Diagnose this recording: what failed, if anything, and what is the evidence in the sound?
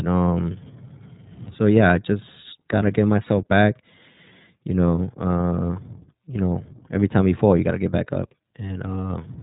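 iLBC codec damage runs throughout the speech, a codec-stage fault. Nothing above about 3.8 kHz survives, so sibilants and consonant edges go dull, and a plainly audible rough, synthetic grain sits on the voice. The encoder codes each short block's excitation independently, with the grain fitting 30 ms frames, which points to the 13.33 kbps mode. Each block is rebuilt without reference to the previous one, so small mismatches give the voicing that coarse, buzzy texture.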